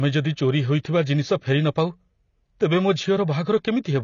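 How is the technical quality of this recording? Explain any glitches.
The recording is audibly degraded from start to finish by lossy compression.

AAC compression affects the whole clip. Nothing is present above 7.1 kHz, so the speech sounds dull and muffled, and sibilants come out fizzy and smeared with a warble on sustained sounds. The likely cause is AAC-LC encoding at a low bitrate, the damage fitting roughly 24 kbps. Short of bits, the encoder discarded the upper band entirely and quantised the remaining frequency lines coarsely, which smears detail across each frame.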